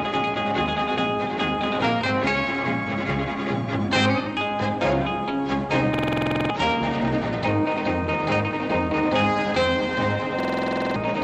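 A system hang loop occurs twice, at 5.94 to 6.50 s and 10.40 to 10.96 s. The driver stalled, replaying one 46 ms buffer, which fits 2048 samples. It stutters at 21.5 Hz and loses about half a second each time.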